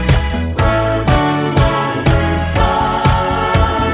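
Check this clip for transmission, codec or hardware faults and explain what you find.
No faults can be heard anywhere in the audio. Nothing in the signal calls for further explanation.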